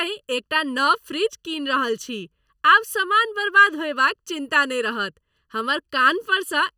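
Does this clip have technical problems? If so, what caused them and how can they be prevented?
Yes. The speech sounds hollow and phasey from start to finish, the signature of channel delay (comb filtering). One channel arrives well under a millisecond late, and summing to mono cancels shared content at regularly spaced frequencies, starting near 700 Hz and repeating further up the spectrum. Unlike room reverberation, there is no decaying tail, just a fixed, static coloration. To prevent it, align the channels in time or check the mix in mono before summing.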